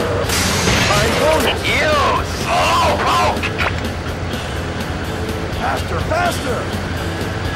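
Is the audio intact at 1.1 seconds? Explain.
No. At 1.06 s there is a repeated buffer: new audio arrived late, so the device played its last buffer once more. The repeat lasts about 1.33 ms, which fits a 64-sample buffer, and is heard as a click or brief buzz at a hard join, with essentially nothing lost.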